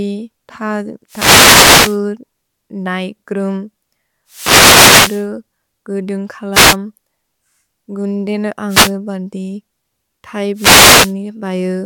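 Wireless microphone noise hits at 1.08–2.00, 4.27–5.28, 6.52–6.77, 8.68–8.93 and 10.54–11.14 s: the FM radio link fades, and receiver hiss swishes up over the speech.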